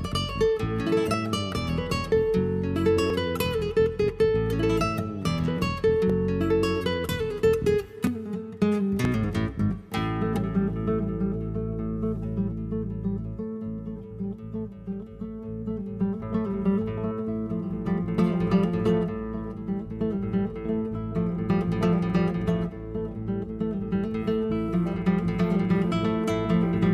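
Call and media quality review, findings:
Tiny skips at 1.14, 2.12, 3.10, 4.08, 6.10, 7.09, 8.07, 9.05 s, roughly once per second. Overlap between stream segments: 1.0 s segments with overlapping timestamps, player trims the overlap, dropping 5 to 18 ms of audio and causing a waveform jump at each boundary.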